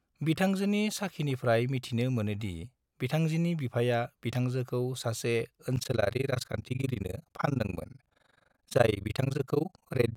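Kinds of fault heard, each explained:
overlap-add ripple: The processing chain split the audio into windowed frames and rebuilt it with an overlap whose windows do not add up to a steady gain, so the level swings once per frame. Here the swing is very deep, about 60 dB, at around 20 times a second. It starts near 5.8 s and lasts to the end, turning the speech into a harsh, chopped tremolo that nearly gates the sound on and off.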